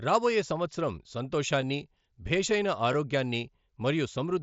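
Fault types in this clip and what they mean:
Concealed Bluetooth headset packet loss at 1.62 s and 2.93 s: at each point, a 7.5 ms gap in the speech, which points to a single lost packet between headset and phone, was filled by the receiver repeating the closest-matching slice of the waveform just before it. Because each gap is so short and isolated, the patch is nearly hidden, at most a faint hitch within the mSBC wideband audio.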